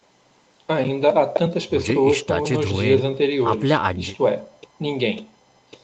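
No technical faults can be heard in this speech clip.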